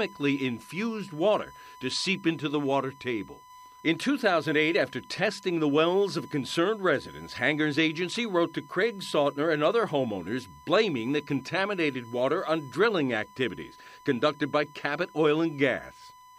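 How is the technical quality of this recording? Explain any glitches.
The recording carries a steady USB whine under the speech from start to finish, a fixed tone at 1 kHz sitting roughly 25 dB below the speech. The bus draws current in bursts every millisecond, and that pulsing leaks into the audio through shared power or ground, producing a thin, high whistle. Unlike mains hum, it sits well above 50 or 60 Hz at an exact 1 kHz, and its pitch never drifts.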